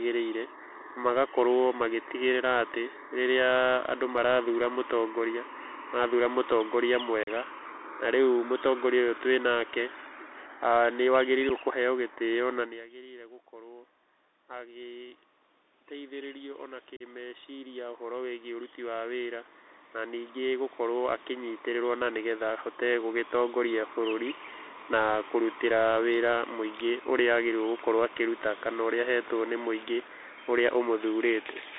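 Throughout the recording the speech carries the sound of a Bluetooth CVSD headset codec, heard plainly. CVSD encodes the signal as a one-bit up-or-down decision per sample with an adapting step size, which fits a 64 kbps link. The band runs only from about 250 Hz to 3.7 kHz, so a spectrogram shows a hard ceiling near 3.7 kHz. Below it lies a granular hiss floor, s sounds turn scratchy, and loud high-frequency energy smears where the step size cannot keep up.

At 7.23 to 7.30 s, right after "marathura mũtongoria marathura mũtongoria", comes the first unconcealed Bluetooth headset packet loss. About 37.5 ms of audio, roughly five packets, never arrived and nothing was filled in. The waveform drops to a flat gap with vertical edges, a short abrupt hole, and the speech resumes briefly quieter as the CVSD step size rebuilds.

At 11.49 s a single packet of about 7.5 ms goes missing the same way. 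It shows as a thin vertical notch across the spectrogram.

Starting at 15.9 s, the level reaching the microphone falls by about 21 dB, and automatic gain rising follows. The control raises its gain by about 18 dB gradually until 23.84 s. The waveform envelope swells steadily over those eight seconds, and the hiss and room background lift along with the speech rather than only the speech recovering.

Within that rise, at 16.97 to 17.02 s, another unconcealed Bluetooth headset packet loss removes about 37.5 ms, roughly five packets. It leaves another abrupt silent slot and a momentarily subdued restart.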